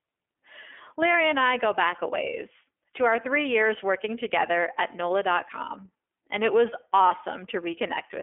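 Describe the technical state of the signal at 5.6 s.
At 5.6 s the speech sounds narrow and plainly rough and synthetic, confined to roughly 300 Hz to 3.4 kHz. This is the iLBC codec, present throughout the clip, coding each 30 ms frame independently at a rate that points to 13.33 kbps.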